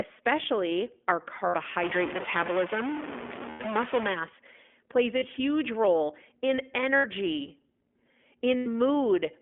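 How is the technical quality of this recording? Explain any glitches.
The technical quality is poor: the speech has been through a narrowband codec, drops out briefly five times, and carries a stretch of distortion.

Throughout, the iLBC codec has coded the audio in independent 20 ms frames, which fits its 15.2 kbps mode, on a line passing only about 250 Hz to 3.4 kHz. The speech sounds muffled and thin, with a plainly audible rough, synthetic edge.

Lost iLBC frames occur at 1.48–1.55 s, 3.50–3.61 s, 5.18–5.24 s (just before "huge role in"), 6.96–7.06 s (just after "huge role in"), and 8.58–8.67 s, lasting 40 to 100 ms. In each gap the decoder repeats the last pitch cycle blended with noise, giving a brief held, buzzy vowel before the speech snaps back.

From 1.83 to 4.14 s the sound is distorted, with noise filling the quieter moments. The likely cause is a stuck bit: one data bit held at a fixed value pushes roughly half the samples off by that bit's weight, and small values near silence are hit hardest.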